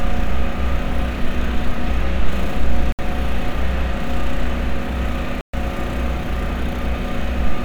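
At 2.92 s the sound drops to silence for about 65 ms. At 5.41 s it cuts out again for about 126 ms. Both gaps are likely a Bluetooth stall. Interference delayed packets, the headphone buffer ran empty, and playback halted until resent data arrived.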